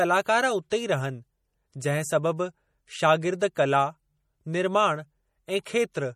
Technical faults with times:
0.00-6.15 MP3 compression
0.70 pre-echo

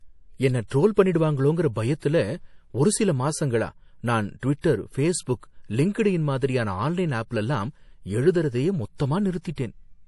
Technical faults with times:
0.00-10.07 MP3 compression
0.67-0.71 pre-echo
4.39-4.64 pre-echo
8.96-8.99 pre-echo
9.41-9.58 pre-echo

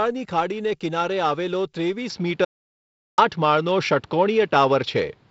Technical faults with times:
2.10-5.30 input switched to a poorer device
2.45-3.18 audio dropout to silence

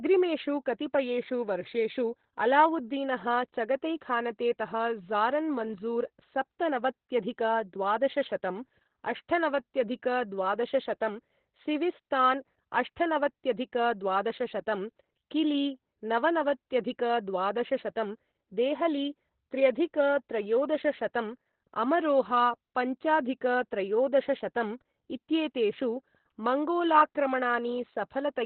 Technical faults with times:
0.00-28.46 Opus voice compression

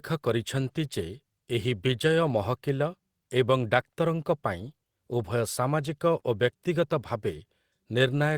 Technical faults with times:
2.27-2.37 lost packet rebuilt from error correction
5.17-5.19 lost packet rebuilt from error correction
6.15-6.25 lost packet rebuilt from error correction
6.19-6.23 short concealed packet loss
7.31 lost packet rebuilt from error correction

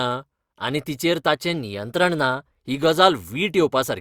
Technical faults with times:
1.54-2.60 drift correction step

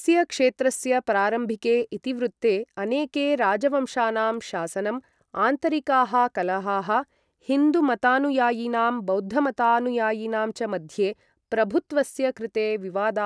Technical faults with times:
none

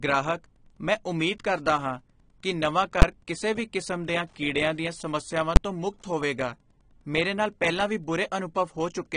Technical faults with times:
0.00-9.16 Wi-Fi interference
0.00-9.16 AAC compression
3.02 invalid numbers at full scale
5.56 invalid numbers at full scale

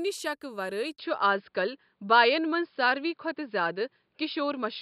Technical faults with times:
0.96-4.82 input switched to a poorer device

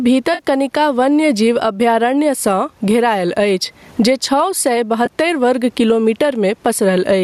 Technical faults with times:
0.00-7.23 gain pumping
0.34-0.41 AAC frame loss with concealment
5.05 AAC frame loss with concealment

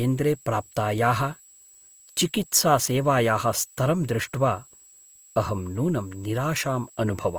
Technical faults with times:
0.00-7.38 switching supply whistle
0.00-7.38 Opus compression

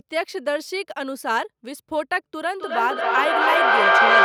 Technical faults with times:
2.60-4.25 feedback echo between two devices

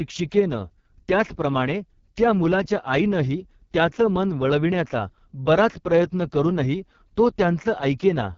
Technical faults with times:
0.00-8.37 AMR wideband (HD Voice) codec

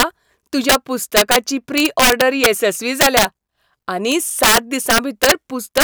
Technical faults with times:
0.00-0.03 integer overflow
0.69-0.75 integer overflow
1.17-1.36 integer overflow
1.78-2.46 integer overflow
3.01-3.25 integer overflow
4.12-5.32 integer overflow
5.77-5.83 integer overflow

